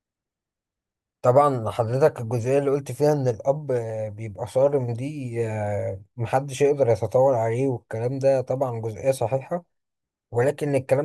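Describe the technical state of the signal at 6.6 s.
At 6.6 s the speech signal is intact, with no audible fault at that moment.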